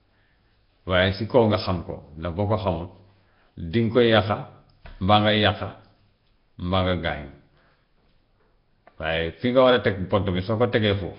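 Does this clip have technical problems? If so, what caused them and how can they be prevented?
Yes. The speech carries a rough, hissy halo with a smeared, underwater quality from start to finish, and nothing comes through above about 5.3 kHz. That points to heavy Nellymoser compression, likely the old Flash microphone codec, at a rate that fits roughly 22 kbps. It spends a fixed small bit budget on each short block, so quieter bands get no bits and are filled in with noise. To prevent it, record with a modern codec such as Opus or AAC at a decent bitrate, or capture uncompressed.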